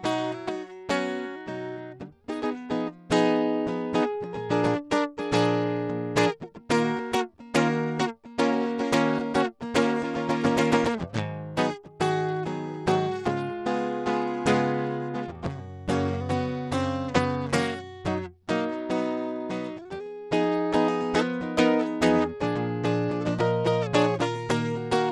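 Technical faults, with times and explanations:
Throughout, Bluetooth SBC compression: the music has plainly audible codec damage, with the treble thinning out and flickering and a gritty, grainy noise with aliasing riding on the sound. The likely cause is the SBC Bluetooth codec at a low bit pool, with the damage level pointing to a rate around 96 kbps. SBC splits the signal into wide frequency bands without modelling hearing, so the quiet top bands get almost no bits and the rest are coarsely quantised.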